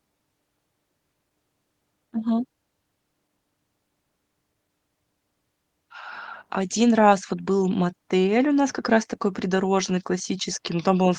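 No technical faults are audible.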